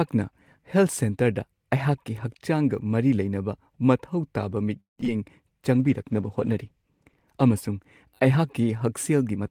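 From 4.80 to 5.08 s, packets arrived late and the jitter buffer kept running dry, producing repeated stalls (stutter): four breaks, the longest 173 ms, where the receiver stretched the last sound to fill about 72% of that stretch. The speech drags and hiccups, with only about 30 ms actually lost.

From 5.73 to 7.99 s, the bandwidth estimate fell and the encoder was pushed from 40 to 18 kbps, a call bitrate drop. Coarser coding holds at the lowest rate for 1.44 s, leaving the speech rougher and duller until the bitrate recovers.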